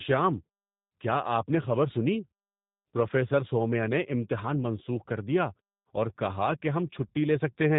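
Throughout, the speech passes through a G.729 codec, likely the G.729A variant at about 8 kbit/s, which rebuilds the speech from a filter and sparse pulses. Everything above 4 kHz is gone, and the voice sounds plainly rough and synthetic, with clean muted pauses.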